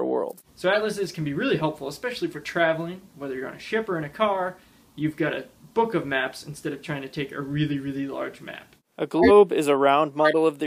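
Five short chirps and noise bursts cut through the audio at 0.73–0.78 s, 2.31–2.38 s, 6.73–6.80 s, 9.18–9.31 s and 10.20–10.35 s. The ones at 9.18 and 10.20 s are harsh and the loudest, the first is fairly loud, and those at 2.31 and 6.73 s are faint blips. Each is a corrupt frame decoded: flipped bits in one or a few compressed frames were played anyway, putting energy at the wrong frequencies.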